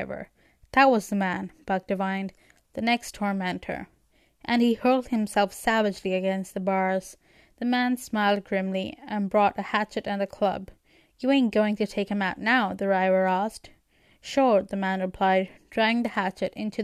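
The speech signal arrives intact, with no technical faults anywhere in the recording.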